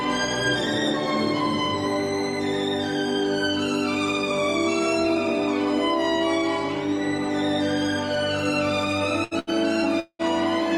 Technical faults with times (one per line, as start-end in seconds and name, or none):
9.24-9.50 burst of packet loss
10.00-10.22 long network dropout